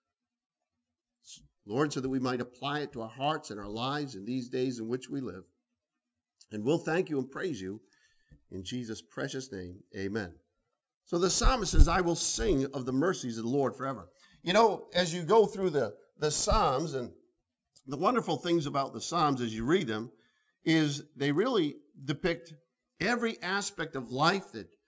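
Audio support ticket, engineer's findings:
Resampler restarted on every block, throughout. Constant 100 Hz buzz riding on the signal, silent in gaps. Consistent with 10 ms blocks converted independently, likely 24 kHz down to 16 kHz, each edge missing neighbour samples and leaving a small error.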